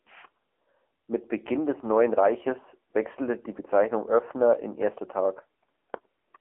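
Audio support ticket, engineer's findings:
AMR narrowband mobile codec, whole clip. Speech confined to a 300 Hz to 3.4 kHz line band, nothing above 3.6 kHz. Plainly audible buzzy, synthetic voicing points to a low-rate AMR-NB mode around 8 kbps. A plain telephone filter would only dull the voice, not add this buzz.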